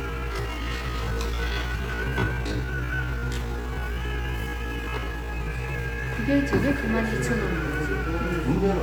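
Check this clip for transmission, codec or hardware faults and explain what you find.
One fault is present: a time-stretched section covering the opening of the clip. From 0.0 to 6.18 s, the sound runs at roughly half its natural pace, about 0.52 times normal speed, with no drop in pitch. The cause is likely software lengthening the audio to fill a set duration. It slices the signal into short pieces and repeats some to pad the time. The stretched stretch drags. The pace then shifts abruptly back to normal after 6.18 s.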